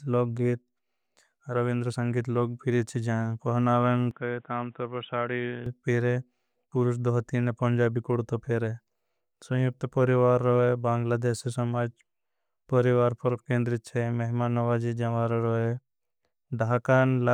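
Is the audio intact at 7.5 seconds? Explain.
Yes, at 7.5 s the speech plays through cleanly, with no dropout, click, distortion or other fault at that moment.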